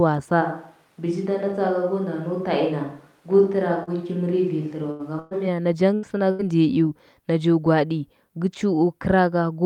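A switch to a distant microphone runs from 0.43 to 5.46 s in this speech recording: the sound turns roomy and hollow, drops by about 5 dB and picks up room noise around 35 dB below the speech, most likely because the close microphone dropped out. A short concealed packet loss at 3.83 to 3.90 s leaves a 40 ms hole that the decoder bridges by extending the preceding sound, heard as a brief smear. A burst of packet loss strikes four times, at 4.91 to 5.02 s, 5.19 to 5.34 s, 5.95 to 6.06 s and 6.31 to 6.42 s, removing 80, 120, 80 and 80 ms of audio. In each gap the last sound is stretched into a held buzz or fading hiss before the audio resumes further on.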